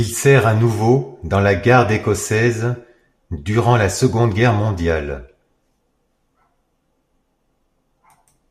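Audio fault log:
Nothing to log here, as this bit of speech comes across without any faults worth noting.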